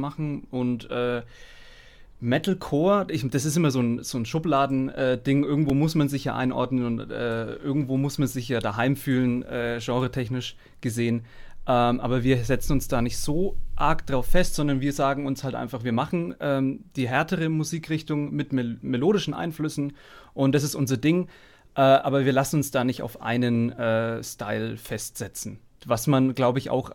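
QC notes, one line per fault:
5.70 s, repeated buffer: a tiny slice, about 1.5 ms and consistent with a 64-sample buffer, replays twice with hard joins, giving a brief click.
13.24 s, repeated buffer: a tiny slice of the same size plays three extra times when fresh audio arrives late, making a slightly longer click-buzz as a few milliseconds go missing.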